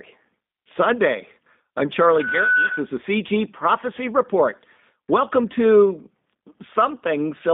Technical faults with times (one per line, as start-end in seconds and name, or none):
0.00-7.54 G.729 codec
2.67-2.71 VoIP packet loss concealed by the speech codec